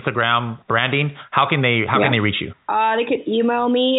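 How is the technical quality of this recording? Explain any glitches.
No glitches or faults heard.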